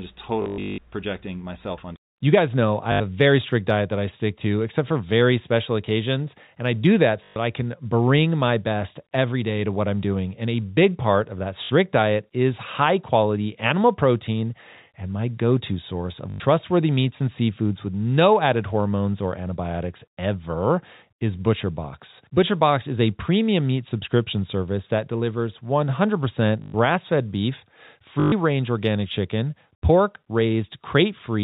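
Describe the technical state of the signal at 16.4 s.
At 16.4 s, packet loss with last packet repeated ends. From 16.3 s, 100 ms were lost and refilled by one looping packet. The repeats buzz, fitting 20 ms packets.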